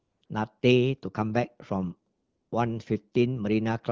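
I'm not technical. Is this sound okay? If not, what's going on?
No. In a few short gaps, the real background sound is swapped for a smooth, even hiss that switches on and off: from 0.00 to 0.21 s, 0.25 to 0.29 s, 0.59 to 0.61 s, and 2.13 to 2.51 s. This is AMR comfort noise. The phone decided nobody was talking and stopped sending the sound itself. The receiving end then filled each pause with artificial hiss made from a rough sketch of the background, so quiet edges of sound can get clipped.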